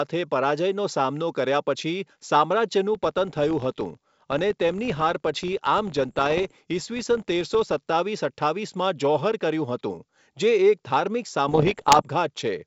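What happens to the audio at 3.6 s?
At 3.6 s the speech is inside a stretch where the filter is restarted on every block, running from 2.95 s to 7.88 s. The filter drops its stored state at each block boundary and begins again from silence. That leaves a small transient at the start of every block. The result is a steady buzz at 43.1 Hz, which fits a 1024-sample buffer. It grows louder and quieter with the speech level.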